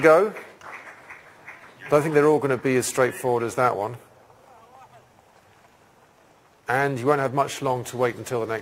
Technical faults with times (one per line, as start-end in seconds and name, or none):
none